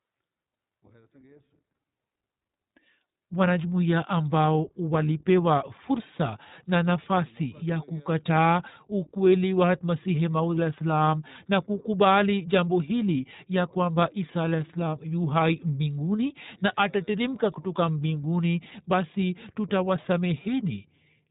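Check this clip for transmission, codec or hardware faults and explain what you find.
The speech sounds muffled and slightly rough and synthetic from start to finish, with nothing above about 3.8 kHz. This is the iLBC codec, a narrowband VoIP coder that encodes each frame's excitation independently, here in 20 ms frames fitting its 15.2 kbps mode.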